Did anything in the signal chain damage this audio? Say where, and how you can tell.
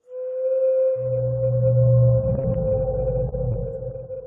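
Yes, all of it on the network side. From 2.35 to 2.73 s there's repeated packet loss with a robotic sound: four gaps, the longest 43 ms, about 60 ms gone and 98 ms patched by repeating the last sound. That's roughly a quarter of the stretch, so it turns choppy.

At 3.29 to 3.34 s a late packet causes a short stall. The jitter buffer ran dry, the last sound got held for 28 ms until the packet showed up, and playback resumed where it left off. Nothing's missing, just a brief drag.

Then at 3.52 to 3.56 s there's a short concealed packet loss. About 20 ms never made it, and the receiver filled 21 ms by extending what came before and blending back in. You hear it as a quick smear or wobble.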